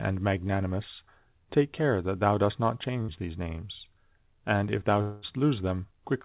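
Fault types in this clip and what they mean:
Burst of packet loss: A short run of audio was lost in transit from 3.02 to 3.10 s. The receiver stretched the last bit of speech for about 58 ms, fading it into a brief buzz or hiss. The speech then jumps ahead, with roughly 60 ms missing.
Long network dropout: From 5.02 to 5.24 s the speech gives way to a fading buzz or hiss lasting about 204 ms, with no silence after it. Speech then resumes about 200 ms further on. This is likely a longer break in the network stream, concealed by repeating the last sound.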